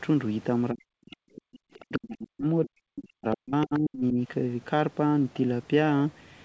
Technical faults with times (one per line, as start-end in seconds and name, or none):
0.73-1.24 speech suppressed in double talk
1.06-1.96 other side's voice leaking through
1.80-4.15 speech suppressed in double talk
3.62-3.79 other side's voice leaking through